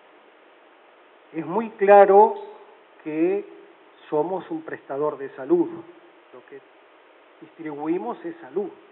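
No technical faults can be heard anywhere in the recording. Nothing in the audio breaks, drops out or changes unexpectedly at any point.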